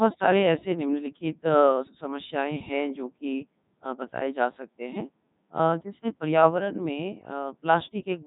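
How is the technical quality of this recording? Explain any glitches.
Poor, because of one fault running throughout. A Codec 2 vocoder rebuilds the speech from pitch, voicing, energy and envelope alone, likely its 3.2 kbit/s mode. It sounds robotic and buzzy, with nothing above 3.8 kHz.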